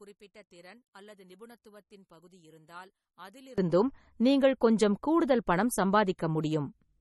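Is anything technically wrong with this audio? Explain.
Yes. From 0 to 3.58 s, summed to mono, the speech drops by about 26 dB to a faint copy, likely from one channel inverted. Opposite polarity cancels the shared centre, unlike a simple level dip. Throughout, the sound stops at 11.8 kHz, and swirly low-bitrate smearing sits alongside a second, different coding texture. This likely comes from transcoding between lossy codecs, pointing to MP3 at 32 kbit/s re-encoded as AAC-LC, rather than to a single encode.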